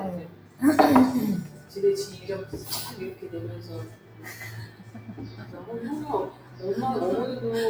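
A noise suppressor applied to music or sounds runs throughout. It treats steady content as noise, so level swings of around 10 dB make the sound pump, and the waveform envelope visibly breathes.

Sound cut by the noise suppressor at 0.23–0.61, 1.48–1.72, 3.89–4.26, 4.66–5.54 and 6.33–6.62 s drops about 6 dB, and the spectrogram shows sustained energy fading into darker patches.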